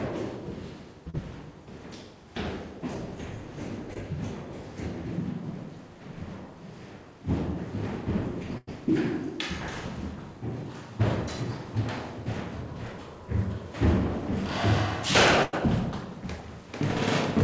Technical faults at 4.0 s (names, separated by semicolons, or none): short concealed packet loss